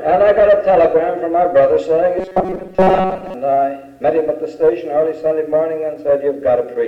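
From 2.18 to 3.34 s the sound turns into a robotic sound from repeated short buffers. It becomes a rigid, metallic buzz at 188 Hz that only loosely tracks the original. The likely cause is audio arriving too slowly, so the playback repeats a tiny slice of about 5.3 ms to fill the gap. Most of that stretch is repeats, while the real audio in between is lost.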